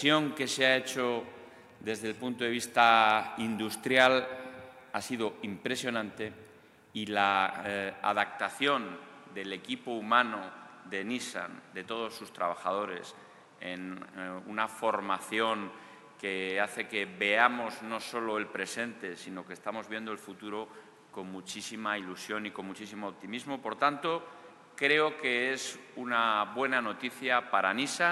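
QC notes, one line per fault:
8.24 s to end, input switched to a poorer device: from 8.24 s the sound loses its top end, with nothing above 11.8 kHz, and a new background noise sits roughly 30 dB under the signal, while the loudness stays about the same and no gap marks the change. The abrupt, lasting shift in bandwidth and noise floor most likely comes from the recording input moving to a different, poorer device partway through.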